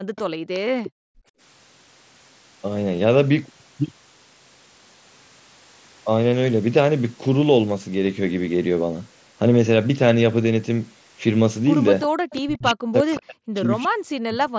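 From the start to 1.37 s, the room background is gated by the echo canceller. The canceller pulled the microphone down hard while the far side played. The background dips by up to about 39 dB, for about a second in all, then returns.

Inside that stretch, from 0.16 to 0.21 s and from 0.54 to 0.91 s, a faint delayed copy of speech appears. It trails by 363 ms. It sits about 20 dB, then about 15 dB, below the speech. This is likely an echo leak: the loudspeaker side's canceller let some of its loudspeaker sound back through.

At 2.97 s and again at 8.07 s there is concealed Bluetooth headset packet loss. Each gap is 7.5 ms, which fits one lost packet. The receiver filled it by repeating recent waveform. Each is nearly hidden, at most a tiny blip.

From 12.02 to 12.4 s the same 363 ms echo returns, about 15 dB down. Within it, from 12.09 to 12.13 s, the background is gated again, a 40 ms drop of about 40 dB.

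From 12.41 s to the end, the speech is ducked by up to about 40 dB, for around 1.5 s in total. It dips and cuts out in pieces. This is speech suppressed in double talk, with both sides likely talking at once.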